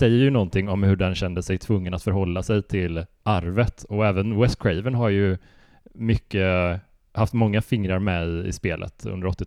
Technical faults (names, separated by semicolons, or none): none